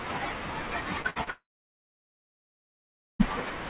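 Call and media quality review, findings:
Short concealed packet loss, 1.02–1.06 s and 1.24–1.29 s: brief smears where about 20 ms of audio went missing each time. The jitter buffer's concealment stretched the last sound over the hole (roughly 20 ms, then 31 ms) and blended back.

Burst of packet loss, 1.10–1.18 s: about 60 ms gone in one go. Concealment held the previous sound for around 56 ms as a fading buzz or hiss, then the speech picks up further along, with that chunk simply skipped.

Dead air, 1.30–3.21 s: roughly 1.9 s of speech never plays. A short concealment tail fades out and then it's about 1.77 s of silence before audio returns. That points to a likely long network dropout rather than anything in the endpoint. Everything rides a narrowband G.711 A-law path at 64 kbps, so nothing above 4 kHz comes through.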